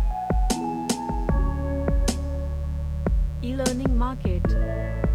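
Mains buzz runs throughout: switching spikes from a 60 Hz supply leak in twice per cycle, giving a steady, raspy buzz roughly 20 dB below the sound.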